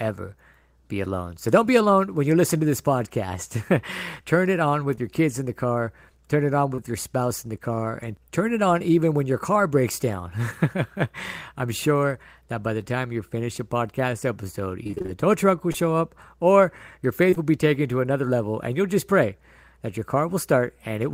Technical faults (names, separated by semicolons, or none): short concealed packet loss; repeated packet loss (robotic sound)